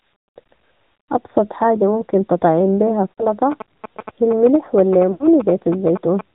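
Throughout, the speech sounds hollow and slightly phasey, with a dull gap in the upper range around 3 kHz. This is channel delay (comb filtering): one channel lags the other by a fraction of a millisecond, and summing them to mono cancels evenly spaced frequencies, with the first notch near 3 kHz. Over the whole clip the voice is also narrow, buzzy and somewhat synthetic, with nothing above 4 kHz. That is plainly audible AMR narrowband mobile codec damage. AMR-NB rebuilds speech from a vocal-tract model at 8 kHz sampling, and the level of artefacts fits the 10.2 kbps mode.

From 3.15 to 3.26 s, just after "حاجة ممكن تطعم بيها", the voice smears into a brief drawn-out warble and sags before recovering roughly. These are lost AMR speech frames, about 60 ms where the decoder repeated its last good settings at falling gain. A longer dropout of the same kind runs from 5.12 to 5.29 s. It stretches and fades over about 80 ms before the speech returns weak.

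From 3.52 to 6.21 s, a galloping dit-dit-dit of short buzzes sits about 10 dB below the speech. These are GSM signalling bursts: a nearby 2G phone's radio bursts, rectified by the audio circuit, buzzing at the 217 Hz frame rate.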